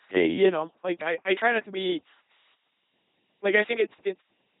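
From start to finish the speech is passed through an LPC-10 vocoder, and the damage is heavy. Each frame is rebuilt from a ten-pole vocal tract filter driven by either a buzzy pulse train or plain noise, so the voice comes out mechanical and robotic, with buzz or hiss wherever the voiced/unvoiced choice misfires. Nothing remains above 3.9 kHz, and the quality points to a 2.4 kbit/s rate. Unlike the warbly, watery smearing of a low-rate CELP codec, this is a hard all-or-nothing switching between buzz and hiss.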